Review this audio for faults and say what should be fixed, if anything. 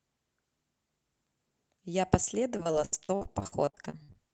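Repeated packet loss (robotic sound) runs from 2.57 to 4.16 s. Short gaps recur throughout, the longest about 69 ms. Each is patched by stretching the preceding sound, so about a third of this stretch is concealed. The speech turns choppy and robotic. Fix it by adding network redundancy such as forward error correction and a larger jitter buffer.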